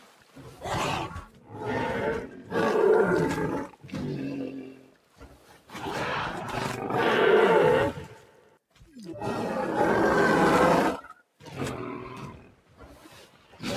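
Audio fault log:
Throughout: noise suppressor applied to music or sounds. A speech-tuned suppressor treats steady tones, ambience and decaying tails as noise and keeps pulling them down, so the level swings by roughly 10 dB. Onsets survive while sustained material sinks, giving a pumping, thinned-out texture.
0.00–0.64 s, 1.25–1.53 s, 2.27–2.52 s, 3.66–3.93 s, 4.62–5.74 s, 8.08–8.94 s, 11.98–13.61 s: sound cut by the noise suppressor. In each stretch the suppressor misjudges sustained or fading sound as noise and attenuates it by about 7 to 10 dB, so held parts dip and tails end abruptly.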